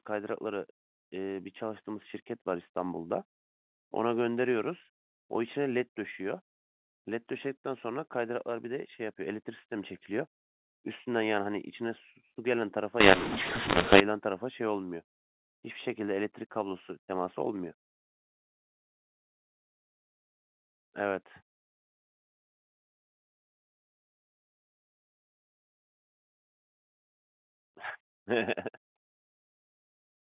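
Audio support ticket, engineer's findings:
Mu-law and A-law mixed up, 13.0–14.0 s: harsh, level-scrambled speech with pauses filled by noise. Mu-law samples decoded as A-law at the G.711 decoder. Unlike plain clipping, quiet passages are lifted too.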